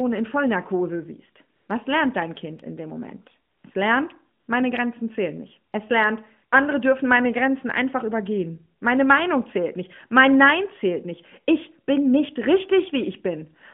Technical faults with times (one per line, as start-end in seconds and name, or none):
1.56-1.68 AMR comfort noise
3.52-3.64 AMR comfort noise
4.40-4.48 AMR comfort noise
5.72-5.74 AMR comfort noise